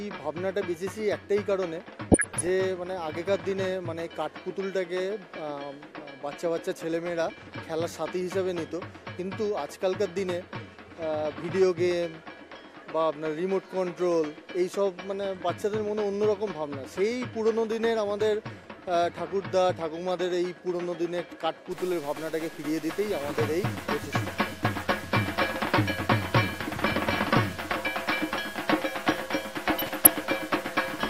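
From 2.07 to 2.49 s and again from 29.70 to 30.07 s there is DAB burbling, where a fraction of a percent of bit errors slip past error correction. Wrong samples give short blips of noise in single sub-bands, and wrong scale factors make sub-bands jump in level for up to a frame, which shows on a spectrogram as scattered bright blocks.

From 21.72 s to the end quiet stretches fill with hiss instead of falling silent. The likely cause is a stuck bit, which pushes about half the sample values off by a fixed step. On the waveform this shows as a jagged offset from the true curve, and on a spectrogram as broadband noise spread across all frequencies.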